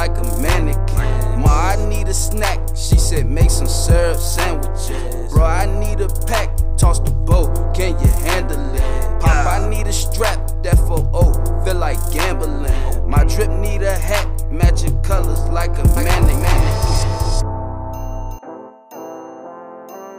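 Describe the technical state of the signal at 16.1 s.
At 16.1 s a doubled audio track is present, running from 15.97 to 18.39 s: a second full-band copy trails the original by roughly 400 ms, about 5 dB quieter, likely from a slower capture path. Unlike an echo, it has no decay or room colour and starts abruptly.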